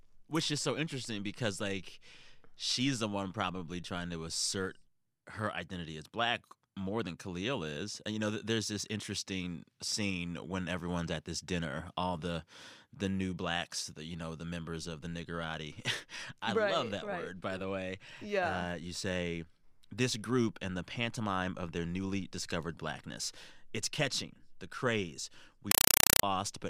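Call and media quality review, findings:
Compressed stream played as audio, 25.71 to 26.23 s, right after "catching the craze". Speech replaced by very loud chattering static, bursts about 4 ms long repeating 31.25 times a second, which fits an AC-3 (Dolby Digital) bitstream passed undecoded over S/PDIF or HDMI. Probable component: receiver or sink treating the encoded frames as PCM. Each frame sounds as a noise burst followed by silent padding. Unlike random digital noise or clipping, the rate is a steady, regular buzz.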